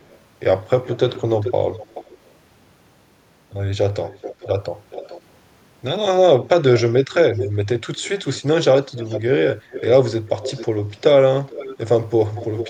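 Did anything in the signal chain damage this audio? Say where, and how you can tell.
Yes. The damage is in call processing. An echo leak occurred: one end's echo canceller likely let part of its loudspeaker pickup back into the send path. A delayed copy of the speech trails the original by about 0.42 to 0.44 s. It is very faint at 0.03–0.17 s and clearer at 0.84–2.31 s and 4.05–5.21 s, roughly 15 dB below the speech. It is strongest from 6.76 s to the end, only about 10 dB down.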